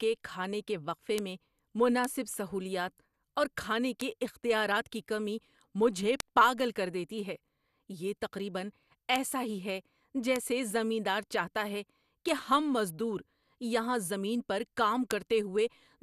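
Bit error spikes occur at 1.18, 2.05, 4.01 (between "سہولیات اور کھانے" and "اختیارات کی کمی مجھے"), 6.20, 9.16 (between "یہ تقریبا" and "ایسا ہی ہے"), 10.36, 12.29 and 15.11 s (after "مزدور یہاں زمین پر"). Each is a flipped bit that throws one to three samples to a power-of-two offset, heard as a sharp broadband tick. Unlike a dropout or clipping, the speech around it is unaffected.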